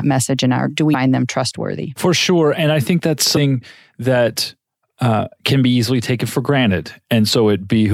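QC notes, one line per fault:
0.90–0.95 s and 3.33–3.38 s: damaged data in a compressed stream. The decoder misreads corrupted frames and loses sync until the next frame header, leaving two brief 0.04 s blips.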